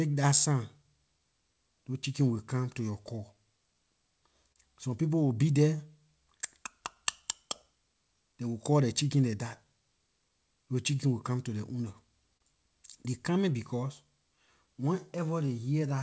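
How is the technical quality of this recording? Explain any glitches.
The recording carries timing faults that make the pacing slightly uneven, with two brief held sounds. Through the G.722 call codec nothing is heard above 8 kHz.

Clock drift between sender and receiver runs through the whole clip. The sender's audio clock runs about 3% slower than the receiver's, so the jitter buffer keeps draining. The receiver has to keep filling gaps, and small timing hiccups recur at uneven intervals.

Repeated timing corrections run from 0.48 s to 15.80 s. To keep pace with the slow sender, the receiver repeatedly stretches or repeats short pieces, all in the same direction. Playback runs at about 98% speed, adding around 0.3 s overall and giving a faintly unsteady tempo.

Short stalls from late packets occur from 4.52 s to 4.57 s and from 12.37 s to 12.42 s. Each time a packet arrived late, the buffer ran empty and the receiver held the last sound for 29 ms and 30 ms respectively until the packet arrived. 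Nothing is lost, but a sound lingers with a slight buzz or dip.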